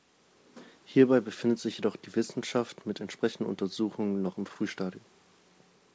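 No technical faults can be heard anywhere in this speech.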